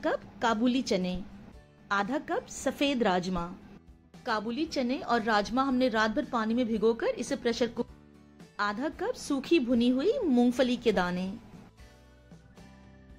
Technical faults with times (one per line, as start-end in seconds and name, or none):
7.81-7.87 stream segment skipped